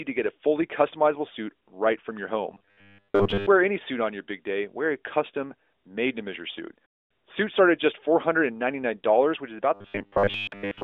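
From 2.52 to 3.47 s, after "suit right from your", and from 9.74 s to the end, after "which is", robotic sound from repeated short buffers appears: a rigid 100 Hz buzz, likely from most of the audio being replaced by repeats of one 10 ms buffer.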